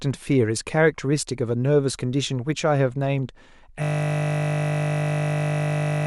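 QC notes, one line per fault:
3.83 s to end (6.07 s): system hang loop. The speech stops abruptly and is replaced by a steady 50 Hz buzz, the same 20 ms slice replaying exactly, over a hundred times, until the clip ends. The machine or driver froze while the output hardware kept cycling one short ring buffer, which fits a buffer of about 20 ms. Unlike mains hum, the buzz carries the timbre of the frozen sound and starts abruptly. Unlike a dropout, it never recovers.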